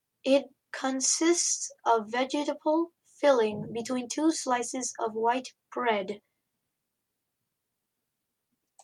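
No technical faults can be heard anywhere in this speech recording. Every moment of the audio sounds as it should, with nothing to point out.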